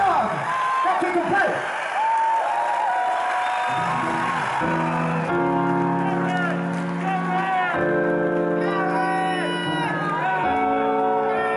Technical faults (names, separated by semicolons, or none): time-stretched section